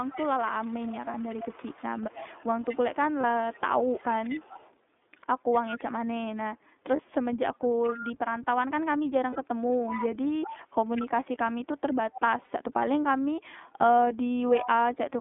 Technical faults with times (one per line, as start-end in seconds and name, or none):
0.00-15.21 iLBC codec
0.00-5.83 echo leak
1.11-1.15 lost iLBC frames
3.21-3.24 lost iLBC frames
6.96-7.00 lost iLBC frames
7.82-8.10 echo leak
9.30-9.36 lost iLBC frames
9.88-11.02 echo leak
12.12-12.21 echo leak
12.45-12.48 lost iLBC frames
14.43-14.68 echo leak